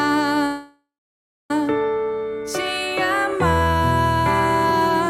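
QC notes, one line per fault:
0.45–1.51 s, call audio freeze: likely delayed packets emptied the jitter buffer, so the last sound fades, goes silent 0.62 s, then resumes intact, inserting a 1.05 s gap.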